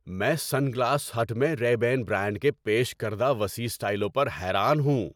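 Nothing stood out as a technical fault on listening to this speech recording.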